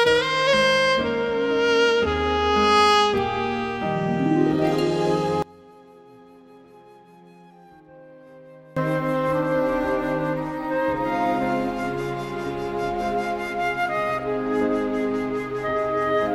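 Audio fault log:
5.42–8.77 s, one channel inverted: the sound falls by about 25 dB, leaving a faint copy. One stereo channel likely has reversed polarity. When the channels are summed to mono, the content they share cancels. Only their small difference remains audible.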